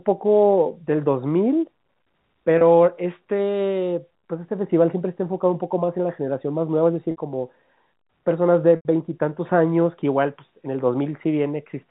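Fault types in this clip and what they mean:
Packet loss with pitch repetition: four dropouts of 30 to 90 ms are bridged by looping the last pitch cycle. Each sounds briefly held and buzzy; the longest fades.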